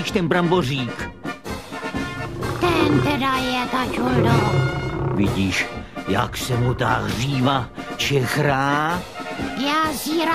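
No technical fault can be heard anywhere in this audio. There is nothing here that calls for a time or a cause.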